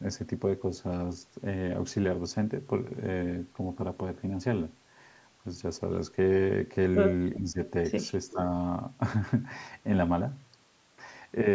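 A speech recording on a call path, with a brief echo leak from 7.35 to 7.39 s: a faint delayed copy of the voice, trailing by 390 ms and sitting well under the direct speech, most likely loudspeaker pickup that the far end's echo canceller failed to remove and sent back. Right after that, the speech is suppressed in double talk from 7.39 to 7.59 s and again from 8.32 to 8.39 s. The voice dips by up to about 10 dB, likely because the canceller could not separate the talker from the echo and attenuated both.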